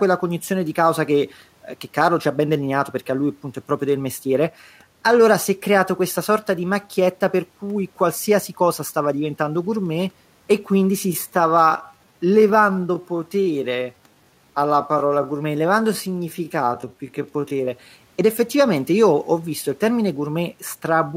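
From 11.04 s to 17.68 s, right after "diventando gourmet e quindi", the speech is likely a time-stretched section: software appears to have slowed this stretch to about 0.71 times its original speed while holding the pitch, filling the extra length by repeating short slices of the waveform. The pace suddenly drags, while the pitch doesn't drop. Quiet room noise sits about 40 dB below the speech.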